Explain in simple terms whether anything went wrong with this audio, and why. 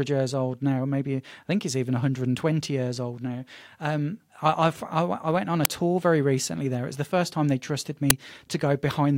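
Two sharp, very loud digital crackles cut into the speech, at 5.65 s after "went on a" and at 8.10 s after "first time they trusted". This is an uninitialised buffer: the playback sent out blocks of audio before they were filled, so leftover memory came out as noise. The bursts fit blocks of about 128 and 256 samples.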